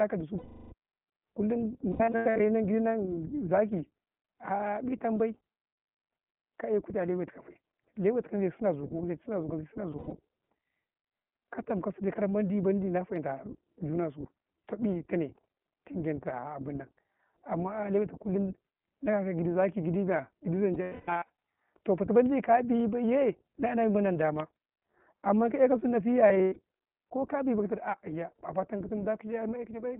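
The whole clip of speech passes through the iLBC codec. Nothing below 150 Hz or above 3.4 kHz survives. Each 20 ms frame is coded on its own, which fits the 15.2 kbps mode. The voice sounds plainly rough and synthetic.

Lost iLBC frames come next, at 0.38 to 0.73 s, 1.92 to 2.41 s, 9.92 to 10.13 s, 20.74 to 21.28 s and 26.28 to 26.58 s. The decoder repeats the last pitch cycle with noise. Each gap is a held, buzzy vowel, longest near 21 s, and then clear speech resumes at once.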